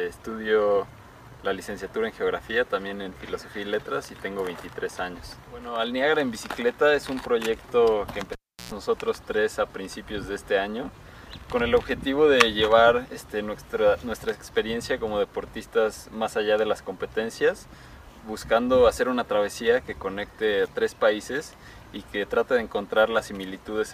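Cable pulled and plugged in at 8.32 to 8.72 s: a pop cuts the audio to near silence for about 343 ms, then a 103 ms burst of 60 Hz mains buzz as the plug's tip makes contact, and another pop when the signal returns.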